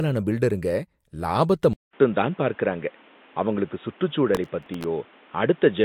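It's a speech clip. At 1.73 s there's a 200 ms silence, then everything above 3.8 kHz is gone and a new noise floor sits about 30 dB down, likely an input switched to a poorer device. From 4.35 to 4.84 s there's processor overload crackle: a gritty run of hard-edged repeats of old audio, which fits a very small buffer missing its deadline about fifteen times.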